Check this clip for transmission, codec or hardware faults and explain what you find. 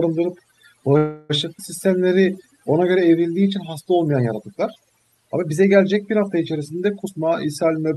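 The clip has five faults: one runs through the whole recording and four occur between about 1 s and the end.

Overdone noise removal, throughout: the background drops and breaks up into twinkling specks. A noise reducer set too aggressively is cutting individual frequency bands whenever they approach its noise estimate, taking the quieter parts of the speech with them.

Call audio freeze, 0.97 to 1.32 s: the sound hangs for about 322 ms as a fading continuation of the last sound, then resumes where it left off with nothing lost. This is likely caused by delayed packets draining the jitter buffer, so the receiver filled the wait with synthesised sound.

Skip ahead, 1.58 to 1.60 s: playback jumps forward with only about 7 ms of fill, and roughly a tenth of a second of speech is missing across the join. A stretch of audio was discarded while later audio was already queued, so the two sides are spliced almost directly.

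Jitter buffer slow-down, 1.87 to 2.61 s: the speech drags at about 90% speed without any change in pitch, with sounds drawn out. To rebuild its reserve, the receiver repeated single pitch periods or pause fragments, adding about 79 ms of audio.

Jitter buffer speed-up, 7.03 to 7.95 s: the speech sounds hurried, running at about 113% speed at the same pitch. The buffer held more audio than its target, so the receiver trimmed short pitch-period pieces in succession, removing roughly 150 ms to reduce the delay.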